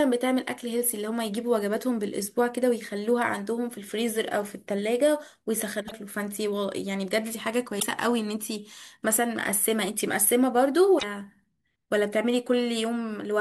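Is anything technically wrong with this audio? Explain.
Yes. There is damaged data in a compressed stream at 5.85–5.92 s, 7.79–7.83 s and 10.96–11.03 s. Corrupted bytes make the decoder misread frames and hunt for sync, producing brief chirps, squawks, clicks or short holes.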